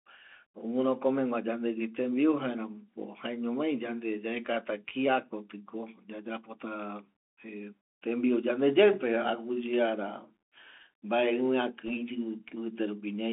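Throughout, the speech has passed through a Bluetooth CVSD headset codec, whose one-bit up-or-down encoding fits a 64 kbps stream. The band runs only from 250 Hz to 3.5 kHz, so the sound is thin and muffled, sibilants turn scratchy, loud peaks distort, and a grainy hiss sits underneath.

From 11.87 to 11.91 s, bit errors on a Bluetooth voice link corrupt the stream at an error rate of roughly one percent. Because each flipped bit nudges the decoder only slightly and then fades, the result is a brief rushing crackle rather than any sharp click.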